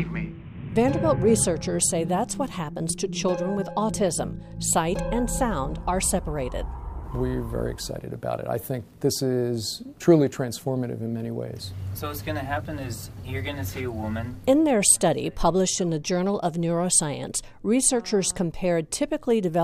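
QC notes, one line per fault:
No faults found, so there are no QC notes to log.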